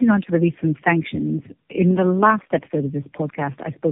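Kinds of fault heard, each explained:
Tandem speech coding: rough, muffled, warbly speech with nothing above 3.7 kHz, which fits three low-rate codecs in a row, each re-coding the previous coder's degraded output.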